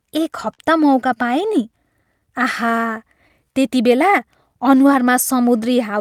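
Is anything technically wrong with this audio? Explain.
Yes, the speech has timing faults from a clock mismatch between the sending and receiving ends.

Clock drift between sender and receiver runs through the whole clip. The sender's clock runs about 4 percent slower than the receiver's, so the receiver's jitter buffer keeps draining faster than it is refilled. To avoid running dry, the receiver must keep padding the stream, and the timing never settles. The result is a recurring unevenness in pacing from start to finish rather than one isolated glitch.

Repeated timing corrections occur from 0.10 s to 5.98 s. Because the sender is slow, the receiver keeps repeating short fragments of audio to stretch playback, running at an effective 97 percent speed and adding around a fifth of a second in total. The corrections all lengthen the audio but land at irregular intervals. Each one is small, so they come across as faint hiccups and a slightly dragging, unsteady tempo.

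A short stall from a late packet happens at 0.54 to 0.60 s. A packet failed to arrive on time and the jitter buffer briefly emptied, so the receiver held the last sound for 44 ms until the data turned up, then resumed exactly where it left off. Nothing is lost, but that moment is drawn out unnaturally, with a slight buzzy or dipped quality during the hold.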